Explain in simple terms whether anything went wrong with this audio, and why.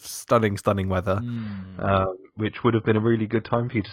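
After "stunning stunning weather", at 1.36 s, the speech suddenly turns dull with no gap, as the adaptive stream switched to a lower bitrate, cutting everything above 5.1 kHz.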